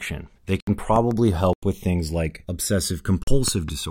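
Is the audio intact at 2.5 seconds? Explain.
No. Channels drifting apart runs throughout: clocks roughly 200 ppm apart slide the inter-channel delay toward about a millisecond, so slowly sweeping comb notches on a spectrogram produce slow flanging.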